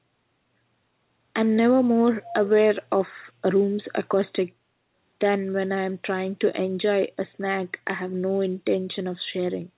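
From 2.22 to 2.48 s, a faint delayed copy of the speech sits under the main signal, trailing it by about 324 ms and roughly 15 dB quieter. This is an echo leak, likely from a far end on loudspeaker whose echo canceller let part of its microphone pickup through and returned it down the call. The echo shares the narrowband character of the call, with nothing above 4 kHz, consistent with a G.711-type path.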